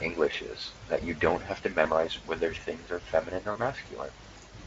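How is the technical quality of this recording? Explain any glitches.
The speech has three short dropouts, heard as VoIP packet loss concealed by the speech codec, at 0.31 s, 1.83 s, and 3.51 to 3.58 s. Each gap fits lost frames of about 20, 20 and 40 ms. The decoder stretches the last sound and fades it, giving a brief buzzy or noisy smear. The Speex coding itself adds little or no audible damage.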